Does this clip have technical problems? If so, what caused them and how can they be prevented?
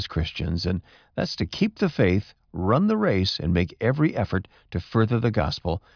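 No, nothing in this speech recording points to a technical fault, so there is no cause to trace and nothing to prevent.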